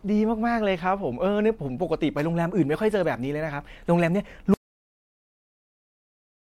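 At 3.02 to 3.05 s there is damaged data in the compressed stream: the decoder hits corrupted frames, loses sync and skips ahead to the next valid header, leaving a brief glitch in the speech.

From 4.54 s the audio drops out to silence and stays silent to the end. The gap is silent with no room tone, so the input signal was likely lost while recording continued, writing silence in place of the speech.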